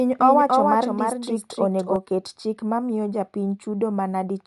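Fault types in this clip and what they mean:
Bluetooth LC3 compression: the speech carries a breathy, grainy edge and nothing above about 11.6 kHz, the kind of damage you get when a transform codec with 10 ms frames drops upper detail and noise-fills it, which fits LC3 at around 48 kbps as the likely cause.
Doubled audio track: a second full-band copy of the speech trails the original by roughly a third of a second, a few dB quieter, with no room tail on it. It's already running as the clip opens and cuts off abruptly near 1.96 s, just before "oket chik mamiyo", likely a second capture path or an out-of-step edit.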